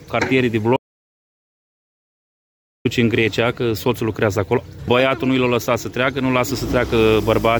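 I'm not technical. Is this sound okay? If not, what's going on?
No. From 0.77 to 2.85 s there is an audio dropout to silence: the sound cuts off completely for about 2.1 seconds, with no background noise at all, then resumes. The input was likely lost briefly, and whatever happened during that gap is gone.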